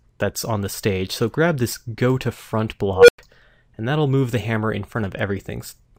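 At 2.95 s an unstable filter takes over. A recursive filter stage has been fed bad coefficients, so its feedback grows instead of decaying. A tone of around 500 Hz swells over about 133 ms into a very loud beep, then overflows and cuts out, leaving about 100 ms of silence until the filter resets near 3.18 s. A spectrogram shows a single bright horizontal line thickening rapidly, then a blank gap. The waveform shows a widening envelope ending abruptly in a flat stretch.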